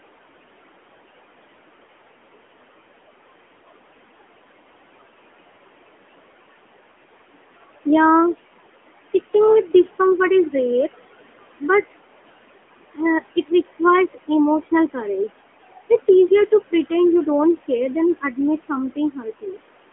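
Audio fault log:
Throughout, noise suppressor artifacts: the room noise, sitting about 15 dB below the speech, is pulled down by about 21 dB whenever the talker pauses and climbs back up under each phrase. The suppressor judges each frequency band frame by frame, so the noise sinks between the words and rises under them. This differs from a simple noise gate, which mutes the whole signal at once. Here the attenuation is uneven across frequency rather than a clean on-off step.
Throughout, AMR narrowband mobile codec: the sound is confined to a line band of about 250 Hz to 3.4 kHz, with nothing above 3.8 kHz, and the damage is plainly audible. The speech has a buzzy, synthetic edge, and the suppressed background turns into a swirling warble. Both come from the codec rebuilding the voice from a vocal-tract model driven by a few pulses per short subframe, which points to a mid bitrate near 10 kbps. 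A plain low-pass filter would dull the top end without adding that artificial buzz.
13.36–14.29 s, 14.62–15.3 s, 15.77–16.91 s (ending just before "you don't care than"), 18.21–19.59 s (starting just after "you don't care than"), speech cut by the noise suppressor: the suppressor mistakes parts of the speech for noise and turns them down along with the background. The drops reach about 15 dB in the first two spans, about 18 dB in the third and about 19 dB in the last. Within each span only short pieces are affected, roughly a tenth of a second in the first and close to half a second in the last. Soft consonants and word endings sound swallowed or faint. A dropout or packet loss would remove the sound entirely, but here the speech remains, only sunk low in level, and it dips and recovers with the suppressor's gain.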